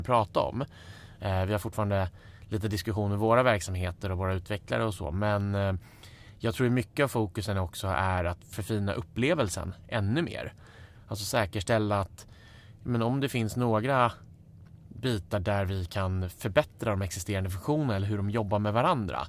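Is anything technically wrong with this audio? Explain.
No, nothing technically wrong stood out on listening to this speech recording.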